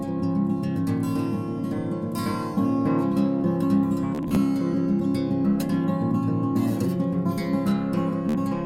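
At 4.15 s the music breaks into a Bluetooth stutter lasting until 4.37 s: short slices of audio repeat in a rapid buzzing stutter, with gaps scattered across about 210 ms and the longest unbroken run near 40 ms. The receiver lost or received late several packets, about 90 ms of audio in total, and replayed its last buffer until data resumed, skipping ahead. A shorter burst at 8.29 to 8.35 s drops about 50 ms the same way.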